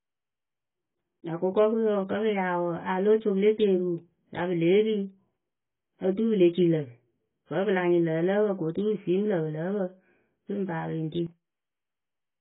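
Throughout, the speech sounds dull and muffled, with nothing above 3.8 kHz, and sibilants and sustained sounds carry a watery, fizzy warble. This is likely heavy AAC compression, with AAC-LC at a very low bitrate, around 16 kbps, discarding the upper band and coarsely quantising what remains.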